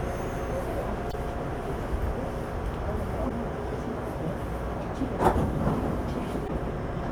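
A recording of sounds carrying damaged data in a compressed stream, heard as brief glitches at 1.09–1.14 s, 3.25–3.31 s and 6.44–6.50 s. Corrupted bytes make the decoder misread frames and hunt for sync. Each event lasts roughly 55 ms.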